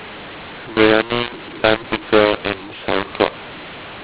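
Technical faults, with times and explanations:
Throughout: mu-law and A-law mixed up. The speech was coded with G.711 A-law but decoded as mu-law, so the sample levels are scrambled. Some come out too loud and others too quiet, making the voice harsh and distorted, and pauses fill with hiss instead of silence.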